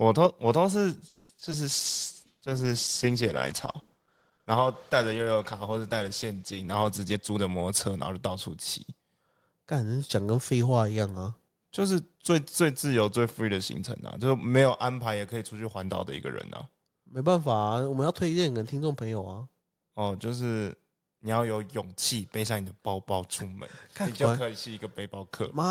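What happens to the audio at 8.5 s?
At 8.5 s the speech is inside a jitter buffer speed-up running from 7.13 to 8.92 s. The receiver trims short pitch-period slices repeatedly to drain excess buffered delay, removing about a fifth of a second overall, so speech plays roughly 13% faster at unchanged pitch and sounds hurried.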